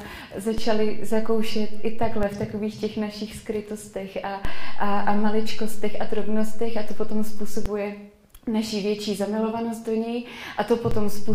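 The audio has three DC steps, where the waveform's zero line suddenly jumps and you hear a low thump while the sound keeps going unchanged. The first runs from 0.58 to 2.23 s at about -18 dBFS, the second from 4.45 to 7.66 s at about -15 dBFS, and the third starts at 10.91 s and holds to the end at about -15 dBFS. There's a thump each time the offset switches in.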